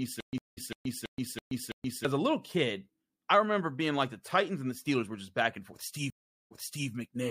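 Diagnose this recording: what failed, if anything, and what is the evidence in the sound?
Stutter with silent gaps from 0 to 2.05 s, already under way at the start. A 205 ms burst repeats every 330 ms, with 125 ms of silence between. This is likely a playback stall.

Stream reconnect at the network stage, at 0.38 s and 6.10 s. After 184 ms and 399 ms of silence, speech resumes 340 ms and 392 ms earlier.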